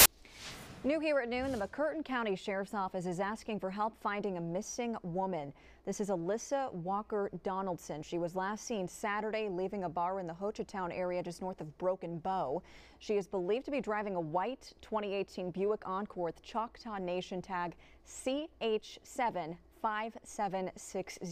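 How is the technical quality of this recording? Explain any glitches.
The recording has one clear glitch, right at the very start. From 0.00 to 0.06 s there is a burst of file tags played as audio: the player has read an embedded cover picture as if it were sound samples. Because image data is compressed and close to random, it comes out as very loud white noise, a harsh hiss with abrupt edges. On a waveform it shows as a solid block of dense, high-level noise; a spectrogram shows a flat, bright band across all frequencies with vertical edges.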